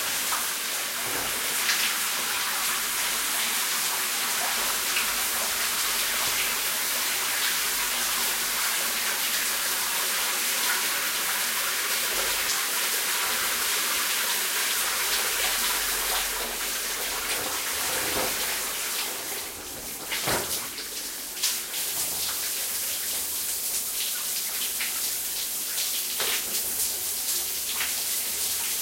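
A brief, irregular burst of crackle and scratching from 12.41 to 12.57 s is loose connector crackle: a worn contact intermittently breaking the signal path, chopping the audio.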